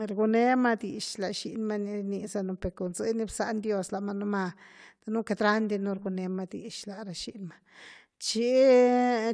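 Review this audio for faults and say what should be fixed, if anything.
Nothing stood out on listening to this speech recording, so there is nothing here that needs fixing.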